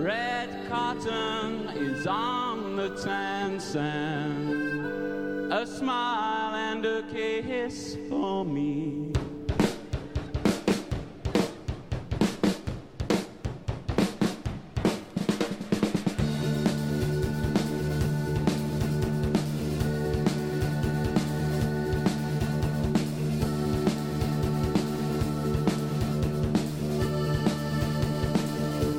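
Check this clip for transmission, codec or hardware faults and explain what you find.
No transmission, codec or hardware faults turn up anywhere in this clip. Nothing in the audio calls for any further explanation.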